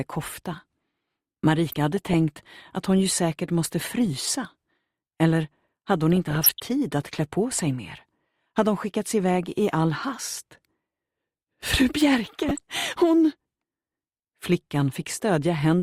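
Three bursts of DAB burbling, at 1.72 to 2.14 s, 6.13 to 6.60 s and 12.25 to 12.59 s. Weak reception lets bit errors slip past error correction, so wrong samples put short blips of noise in individual sub-bands, and wrong scale factors make sub-bands jump in level for up to a frame.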